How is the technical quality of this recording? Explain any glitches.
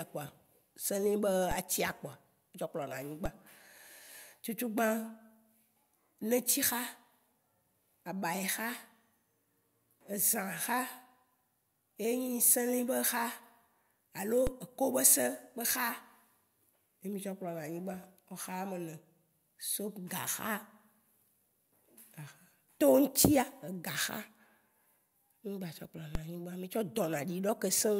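The speech has four DC steps, at 1.51 s, 3.26 s, 14.47 s and 26.15 s. Each time, the waveform's zero line suddenly jumps, about -24 dBFS for the first two and about -21 dBFS for the last two, then drifts back as a 20 Hz high-pass bleeds the offset away. You hear each one as a low thump or click under the speech, with the speech itself carrying straight through unaffected.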